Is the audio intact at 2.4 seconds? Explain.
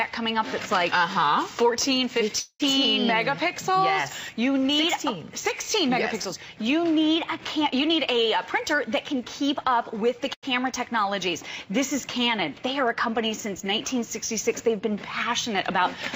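No. A call audio freeze runs from 2.39 to 2.62 s. The last sound is stretched into a fading buzz for about 0.2 s, ending in a brief silence. Packets were likely delayed, emptying the jitter buffer. Nothing is lost; the audio resumes 0.2 s late.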